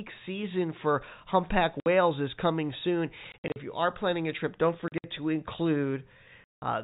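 At 1.8 s, right after "season for humpback", there's a clean 60 ms gap, the first case of packet loss filled with silence. The receiver simply dropped silence into missing packets, so each hole has hard edges. Scattered gaps follow across 3.32–3.56 s, then 4.88–5.04 s after "planning a trip don't", and a solid 180 ms hole at 6.44 s. Hole lengths step in 20 ms units, which fits 20 ms packets riding on the G.711 telephone coding.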